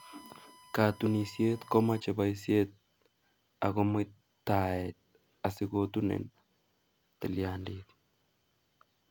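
A steady, fixed-pitch whine sits under the speech from the start to 2.0 s, centred at 1 kHz and roughly 25 dB below the voice. This is USB whine: current drawn in 1 ms bus frames leaks through power or ground into the audio path.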